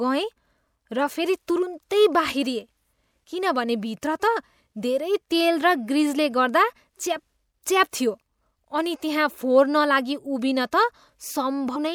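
At 11.75 s the speech jumps forward by roughly a tenth of a second: compressed frames skipped. Several whole frames were missing or rejected by the decoder, and the jump fits about five frames of 24 ms each.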